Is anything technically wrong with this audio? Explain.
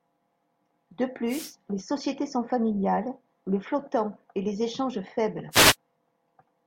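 Yes. The clip is speech, and it carries two wireless microphone noise hits, from 1.27 to 1.53 s, just before "les sociétés sont familiales", and from 5.51 to 5.76 s, just after "et les échanges faibles". Each time, the analogue FM radio link fades as reflected signals cancel at the receiver, so receiver noise swells over the voice as a brief quarter-second swish of static.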